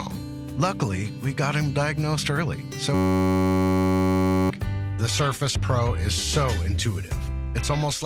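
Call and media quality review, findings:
System hang loop, 2.94–4.50 s: system or driver stall, ring buffer replaying one 10.67 ms slice, which fits a 512-sample buffer. Steady 93.8 Hz buzz; about 1.5 s of audio lost.

Adaptive stream at a lower bitrate, 4.94 s to end: connection slowdown forced a lower-bitrate rendition. Abrupt, gapless drop in quality and heavier codec artefacts.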